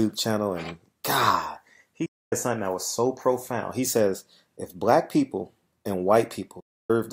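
Two digital broadcast dropouts break the audio: the receiver lost valid frames and muted, fading out over about 8 ms at 2.06 s and 6.60 s. Gaps of 0.27 s and 0.30 s follow, which fits roughly eight or nine 32 ms frames. Both show as flat-line waveform holes and blank vertical bands on a spectrogram.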